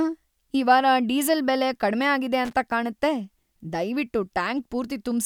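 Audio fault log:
2.45–2.53 s, loose connector crackle: a worn or dirty contact somewhere in the signal path briefly loses and regains contact as it shifts, breaking the circuit repeatedly within about 80 ms. Each break chops the speech signal off and back on, and any DC offset on the line turns every reconnection into a pop. The result is a short, irregular burst of scratchy crackle sitting over the speech rather than part of it.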